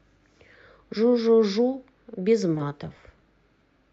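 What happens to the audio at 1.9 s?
At 1.9 s the speech comes through intact, carried normally by the WebRTC call path with its Opus coding and its top end rolled off around 8 kHz, and nothing breaks, drops out or distorts at that point.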